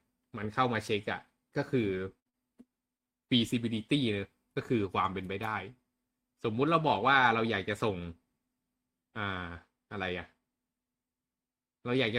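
A speech recording with two back-to-back dropouts in the audio stream. From 2.19 to 2.27 s there is a burst of packet loss. Roughly 60 ms of speech never arrived, and the receiver covered the hole by extending the last sound while fading it down. What you hear is a held, decaying buzz or hiss, after which the speech picks up further along with that stretch simply gone. Only 20 ms later, from 2.29 to 2.35 s, comes a short concealed packet loss of about 40 ms. Here the decoder again continued the preceding sound, then blended back into the real signal. The result is a quick smear or wobble rather than a noticeable hold-and-fade. The difference lies in length and shape: the first event is long enough for the concealment to audibly decay and leave a skip in the speech, while the second is brief enough to pass as a momentary blur, at most swallowing a short consonant.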